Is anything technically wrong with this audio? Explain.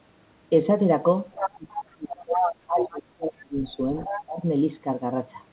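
Yes. Between 1.33 and 4.43 s the call's echo handling fails in two ways.

Other side's voice leaking through, at 1.33–1.51, 2.33–2.99 and 3.64–4.22 s: the likely cause is a loudspeaker feeding the far end back into the microphone and an echo canceller leaving part of it in place. A second voice appears in those stretches. It sits about 5 dB below the talker at first, matches the talker's level in the middle stretch, and is about 10 dB down in the last.

Speech suppressed in double talk, from 1.51 to 4.43 s: while both ends are active, the canceller likely cannot tell the local talker from the echo and pulls the whole signal down. The talker's voice dips in pieces across this span, about two seconds in all, falling by roughly 30 dB at its deepest, so parts of it nearly vanish. The 64 kbps G.711 call path carries nothing above 4 kHz.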